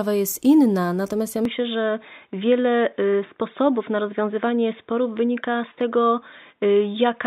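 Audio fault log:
1.45–7.26 s, input switched to a poorer device: from 1.45 s to the end, nothing reaches above 3.8 kHz, so the audio turns dull and boxy, with no gap and no level jump. This is likely a change of input device rather than a filter, because a faint new noise floor, roughly 50 dB down, arrives with the change in tone.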